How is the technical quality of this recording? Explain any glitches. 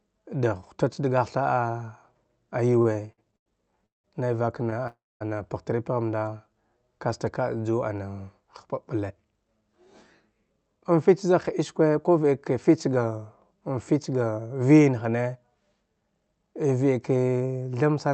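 The recording has clear network-delivery problems. It came through a call path whose upper band stops at about 8 kHz, which fits Opus at a moderate call bitrate. Five timing faults disturb it in the first 14 seconds.

Repeated stalls (stutter), 2.73 to 4.06 s, ending just before "nai vak": packets arrived late several times in a row, and the jitter buffer emptied nine times. Each time the receiver extended the last sound until fresh audio was available. In total 405 ms was filled in, about 31 percent of that stretch, with the longest wait 179 ms. Nothing is lost, but the speech drags and stutters, with held sounds and brief fades where the waits ran longest.

Short stall from a late packet, at 4.70 s: a single packet was not there when it was due. The receiver stretched the preceding sound by 18 ms and then resumed from the same point, which added 18 ms of delay. The effect is a sound held fractionally too long, with a faint buzz or dip, and no content missing.

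Call audio freeze, 4.87 to 5.23 s, just before "ana pagh tri": the audio stops and holds for 331 ms. It begins as a continuation of the last sound that fades out, followed by about 230 ms of silence, and then the speech picks up exactly where it stopped. The likely cause is packets held up in transit, which left the jitter buffer empty and pushed everything after it 331 ms later. Nothing is skipped, but a gap is inserted.

Jitter buffer slow-down, 6.19 to 6.54 s, right after "ana pagh tri": the buffer was rebuilding its reserve, so the receiver repeated single pitch periods and short slices of pause. This added 51 ms and played the passage at 88 percent speed. The pitch stays unchanged, so the result is drawn-out syllables rather than a lower voice.

Jitter buffer speed-up, 8.42 to 14.13 s: the buffer held more audio than its target, so the receiver removed short pitch-period pieces over and over, about 0.3 s in total. 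Playback runs at 105 percent with the same pitch. Over those six seconds the speech sounds mildly hurried and its rhythm is slightly compressed.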